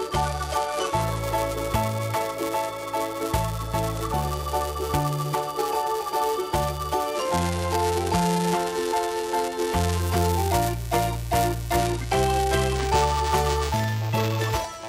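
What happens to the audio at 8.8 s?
At 8.8 s the sound carries a steady robotic 375 Hz buzz, present throughout: buffer tearing, where a small slice of each 128-sample buffer replays audio from a lap earlier.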